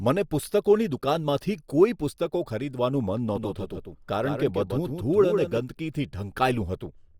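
A doubled audio track runs from 3.36 to 5.58 s. A second full-band copy of the speech trails by roughly 150 ms at about 5 dB lower, likely from a slower capture path. It starts and stops abruptly and carries no decay or room colour.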